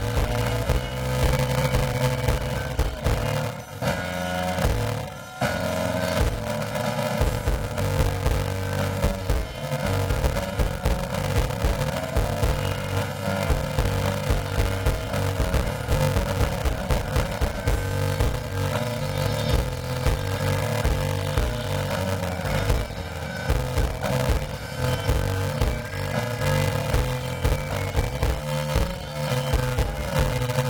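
Planar audio read as interleaved runs throughout the clip. The audio is stored in blocks of left samples followed by right samples, but it is played back as if the two channels alternate sample by sample. Each 2.67 ms block therefore plays twice at double speed, first the left half and then the right. The blocks are 128 samples long, which fits a 48 kHz stream. Because they are so short, there is no clear octave shift. Instead the sound takes on a robotic buzz at about 375 Hz, the rate at which the blocks repeat.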